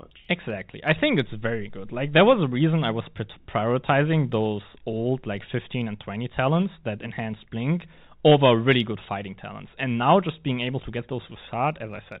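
Telephone-band speech with no audible technical faults.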